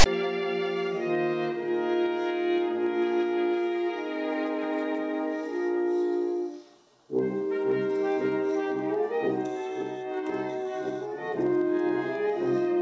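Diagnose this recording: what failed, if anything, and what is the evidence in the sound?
The failure's in storage or playback: file tags played as audio. Right at the top, from 0.00 to 0.06 s, there's a hard-edged rasp offset to one side, then dead silence. The player read a text tag block and its zero padding as samples.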